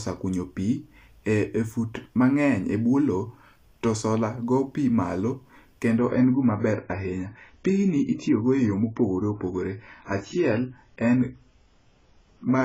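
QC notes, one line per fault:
5.98 to 12.64 s, adaptive stream at a lower bitrate: the player switched from a higher-quality rendition, sounding like 96 kbit/s AAC, to a much leaner one near 16 kbit/s, likely because the connection slowed. From there to the end nothing remains above 7.7 kHz, so the speech turns abruptly dull and smeared with coding artefacts, with no gap at the switch.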